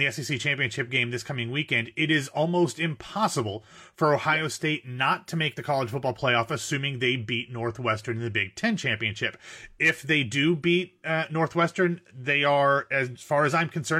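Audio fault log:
Nothing to log here; this bit of speech came through without a single fault I could point to.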